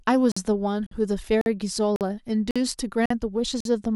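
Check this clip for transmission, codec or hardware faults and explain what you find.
A gap between chunks breaks up this speech clip: the audio was delivered in half-second chunks, and each join leaves about 48 ms of silence instead of running straight on. The holes fall at 0.32, 0.87, 1.41, 1.96, 2.51, 3.06 and 3.60 s, one roughly every 0.55 s. No speech is lost, but it stops dead at each join and resumes abruptly, giving a regular hard-edged stutter.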